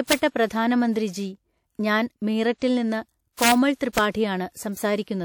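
Speech with integer overflow at 0.12 s, 3.42–3.52 s and 3.98 s, where peaks about 1 to 2 dB over the limit wrap to the opposite sign, showing as sudden full-range polarity spikes in the waveform and broadband vertical streaks on a spectrogram. Pre-echo at 3.75–3.81 s spreads codec noise about 58 ms ahead of an attack, visible as a hiss smear preceding the onset.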